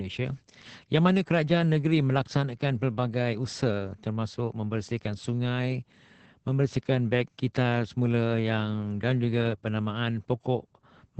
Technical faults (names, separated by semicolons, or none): Opus voice compression